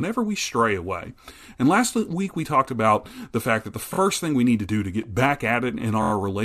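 At 3.93 to 3.97 s, between "the fact that the" and "thing we need to", the speech stutters from repeated frames: one compressed block of 23.2 ms, which fits a 1024-sample frame at 44.1 kHz, plays two extra times, adding 46.4 ms. A second run at 6.02 to 6.11 s repeats one block four extra times, adding 92.9 ms. Each repeat is heard as a stutter.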